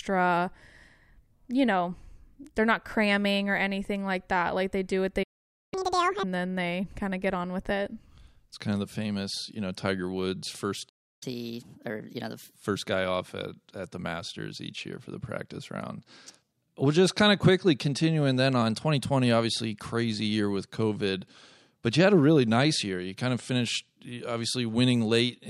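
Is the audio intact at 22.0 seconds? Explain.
Yes, at 22.0 seconds the speech plays through intact, with no audible fault at that moment.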